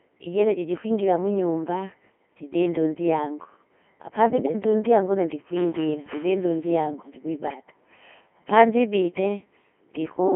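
The whole clip runs through a Codec 2 vocoder, with a thin 200 Hz to 3.4 kHz band and heavy buzzy, robotic resynthesis that fits a very low 2.4 kbit/s mode. At 4.32 to 4.54 s and again at 7.48 to 7.74 s, bit errors on digital voice radio, at a few percent, scramble the frame parameters, so the speech lurches in pitch and level into warbling gibberish.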